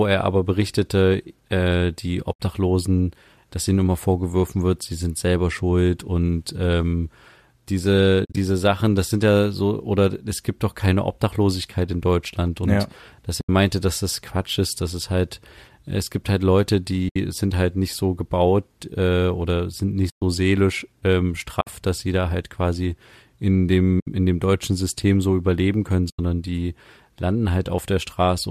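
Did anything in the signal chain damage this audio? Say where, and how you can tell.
Yes. In the network and codec stage, AAC frames went missing and the decoder muted them, which gives soft-edged gaps at 2.33, 8.25, 13.41, 17.09, 20.10, 21.61, 24.00 and 26.10 s. These gaps last 60 to 120 ms. The one at 8.25 s is broken up over 120 ms. Their sizes fit the 10 ms frames of the likely low-delay AAC coding.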